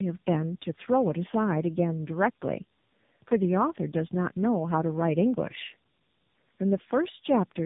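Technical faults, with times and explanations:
Throughout: tandem speech coding; two AMR-style coders in series compound losses, leaving rough, muffled, warbly speech; spectrograms show smeared harmonics and nothing above 3.8 kHz.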